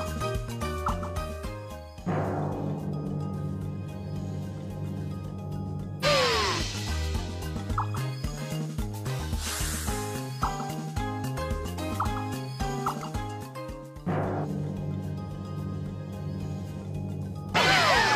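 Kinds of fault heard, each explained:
Compressed frames skipped: jumps at about 6.0, 14.4 and 17.5 s, where the sound leaps ahead by roughly a third, a half and a tenth of a second. Whole 46.4 ms compressed frames went unplayed.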